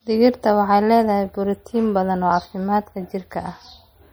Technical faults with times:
0.00-4.12 MP3 compression

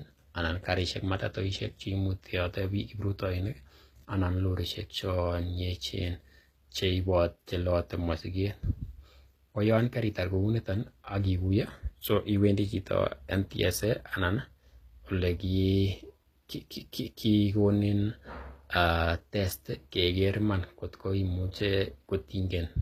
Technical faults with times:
0.00-22.81 HE-AAC compression

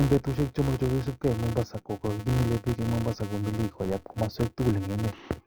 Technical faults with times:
0.00-5.46 filter restarted on every block

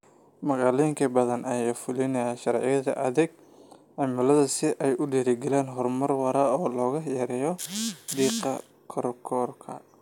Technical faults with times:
none

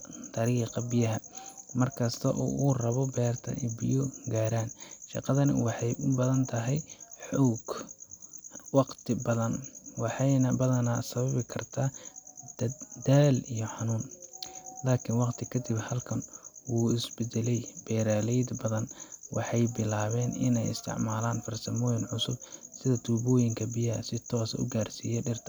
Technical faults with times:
none

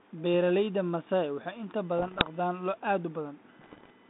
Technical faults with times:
1.98-2.27 bit errors on an ADPCM link
3.60-3.91 bit errors on an ADPCM link

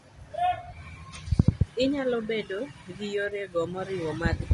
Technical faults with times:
0.00-4.54 low-delay AAC compression

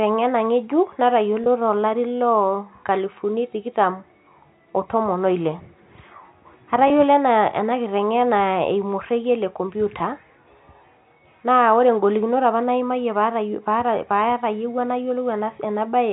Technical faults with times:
1.44-1.46 packet loss with pitch repetition
6.88-6.90 packet loss with pitch repetition
9.99 packet loss with pitch repetition

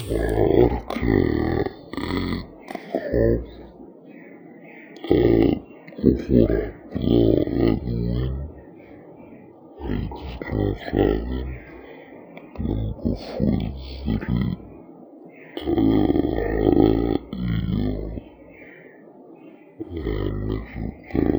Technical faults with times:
0.00-21.39 stereo read as mono

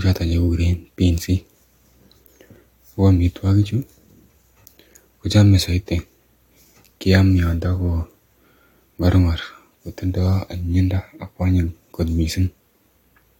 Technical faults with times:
none

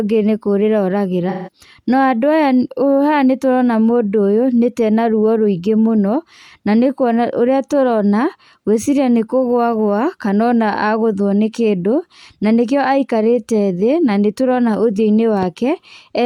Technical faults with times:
1.29-1.49 AAC frame loss with concealment

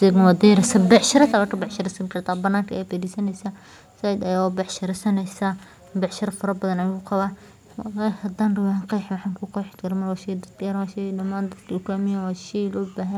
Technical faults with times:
0.91-1.25 microphone overload
1.32 microphone volume stepped down

